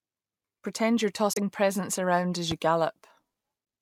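At 1.33 to 1.38 s, damaged data in the compressed stream makes the decoder lose sync and hunt for the next frame, leaving a brief disruption just before "presents around as". At 2.51 to 2.54 s, just after "presents around as", a loud pop, likely a voltage spike from a switch or static, lands about 10 dB above the speech, which continues underneath.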